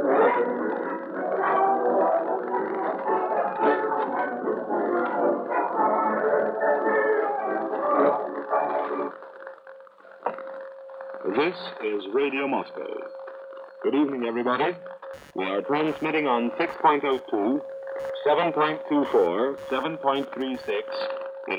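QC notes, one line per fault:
15.13–21.05 s, computer activity noise: a buzzing, chirping layer pulsing at around 150 Hz appears roughly 30 dB below the sound and rises and falls independently of it. Shifting processor, graphics or mouse load moves the shared ground of the audio circuit, so the machine's activity leaks into the signal. A spectrogram shows a comb of harmonic lines from about 150 Hz, broken into irregular bursts. The waveform shows a low, ragged floor under the sound.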